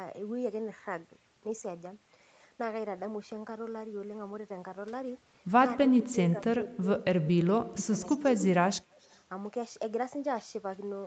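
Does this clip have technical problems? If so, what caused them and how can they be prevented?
Yes. The speech dips in level at 5.75 to 5.8 s, 5.96 to 6.86 s, 7.21 to 7.93 s, 8.15 to 8.33 s and 8.55 to 8.87 s. The drops run from roughly 15 to 30 dB. This is speech suppressed in double talk, likely from an echo canceller that heard both sides at once. It could not tell the talker from loudspeaker echo, so it turned everything down. Headsets, or a canceller tuned to keep near-end speech during double talk, prevent it.

A delayed copy of the speech also appears at 7.77 to 7.83 s, 8.05 to 8.26 s and 8.92 to 9.21 s. It trails the original by 262 ms. It sits about 10 dB below the speech at first, then fades to about 25 and 35 dB down. This is an echo leak, likely from a loudspeaker whose echo canceller let some pickup through and sent it back. Using headphones, or lowering speaker volume so the canceller can converge, prevents it.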